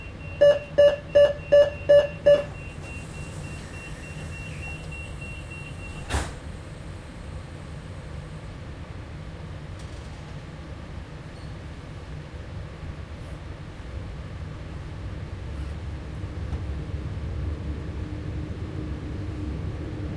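No technical faults are audible.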